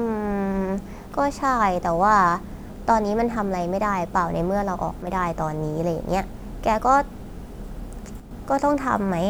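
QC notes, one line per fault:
5.02 to 5.07 s and 8.20 to 8.31 s, one channel drops out: the speech dips abruptly by about 6 dB, for 50 ms and then 110 ms, and recovers just as suddenly. The likely cause is one stereo channel briefly losing signal. When the pair is folded to mono, sound shared by both sides loses half its amplitude. Anything carried only in the lost side vanishes. Hard edges make each dip sound like a brief flicker in level.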